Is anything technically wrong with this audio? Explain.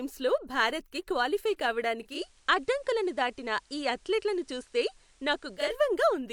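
Yes. From 2.01 s to 5.78 s, just after "భారత్కి క్వాలిఫై", a steady hiss sits faintly beneath the speech, about 35 dB down, with no change in level. This is digital radio blending to analogue: the receiver cross-faded over a quarter second to the FM broadcast, then back.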